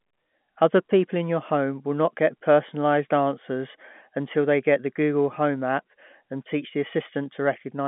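No technical faults are audible in this telephone speech.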